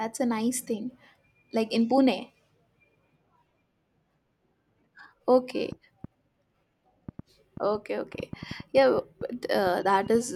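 Uneven ticking sits over the speech from 5.72 to 10.16 s, a train of clicks, about 20 at 3.84 per second, likely from nearby interference.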